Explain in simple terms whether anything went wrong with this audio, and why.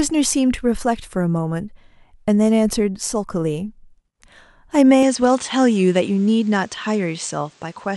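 From about 5.03 seconds to the end, the speech turns slightly duller, losing its crispest top above about 9.2 kHz, with faint new background noise but no gap or volume jump. The likely cause is an input switched to a poorer device partway through recording.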